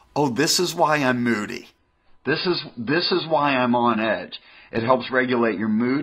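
At 1.78 s, just after "is why I'm moody", the adaptive stream drops to a lower bitrate until the end. The switch is sudden, with no gap. Nothing sounds above 5 kHz, and artefacts thicken. This fits a fall from 96 to 16 kbit/s.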